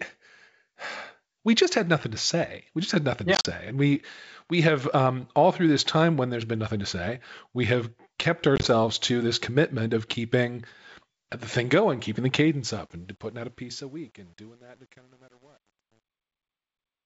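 At 3.35 to 3.48 s and again at 8.56 to 8.68 s, packet loss on an ADPCM call punches hard-edged silent gaps into the speech. The first totals 70 ms over 100 ms, with a longest run of 40 ms, which points to roughly seven lost packets. The second totals 50 ms over 80 ms, with a longest run of 20 ms, about five packets. On the waveform these gaps show as flat silent stretches. On the spectrogram they are clean vertical blank slots. Because the decoder's predictor and step size drift away from the sender's, the sound resumes with a brief level or distortion error before resettling.

From 12.50 s the smooth fade-out runs to the end, but it suffers truncation distortion on a fade. The gain stage keeps too few bits, which fits about 9-bit precision, and adds no dither. From 13.43 s to 17.06 s the tail turns gritty. The waveform there breaks into coarse square steps, and the spectrogram shows broadband grainy speckle instead of smoothly decaying harmonics.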